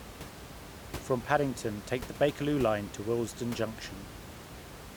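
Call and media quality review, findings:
No system faults found.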